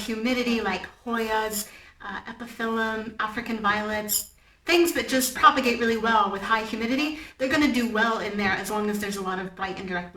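Periodic clock jitter runs through the whole clip. The converter clock wobbles at around 2 kHz, adding sidebands that give high content a rough, metallic edge.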